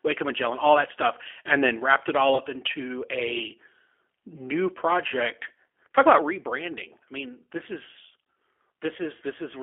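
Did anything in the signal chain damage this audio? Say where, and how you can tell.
Yes. The codec stage imposes G.729 coding throughout: spectrogram energy sits only between 300 Hz and 3.4 kHz, with rough, synthetic-sounding speech that fits an 8 kbit/s model-based codec.

On the network side, VoIP packet loss concealed by the speech codec appears at 2.35–2.40 s: about 20 ms, fitting one lost packet. Frozen, smeared harmonics on the spectrogram fade as the decoder extrapolates.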